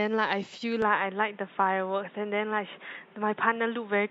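A speech recording whose input most likely switched to a poorer device at 0.82 s, an input switched to a poorer device that stays in place to the end. The new path cuts everything above 3.8 kHz, so the voice turns dull and boxy at once, with no gap at the changeover. The level shifts by roughly 5 dB, and a fresh background noise appears, sitting about 30 dB below the speech.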